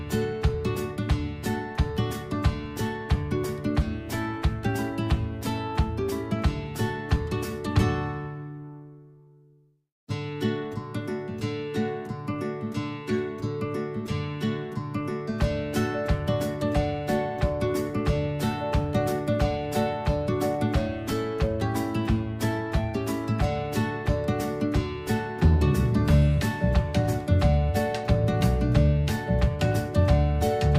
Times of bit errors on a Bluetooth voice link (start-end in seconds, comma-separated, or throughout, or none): none